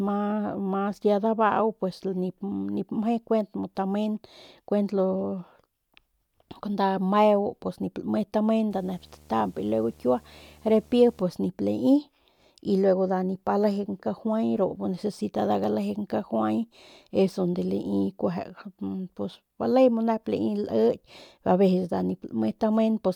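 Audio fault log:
8.71–11.22 s, video or display buzz: a screen or video cable couples into the audio, adding a 75 Hz field-rate buzz with hash above it, roughly 30 dB under the speech. A spectrogram shows evenly spaced harmonic stripes from 75 Hz upward across that span.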